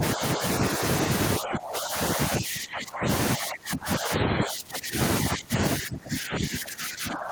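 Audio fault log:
0.00–0.44, 0.60–0.81, 1.39–2.00, 2.16–3.08, 3.35–4.97, 5.23–5.61 and 5.78 s to the end: speech suppressed in double talk. The speech repeatedly sinks by about 5 to 25 dB, deepest from 1.39 s on. This is likely an echo canceller treating the talker as loudspeaker echo while the far side spoke.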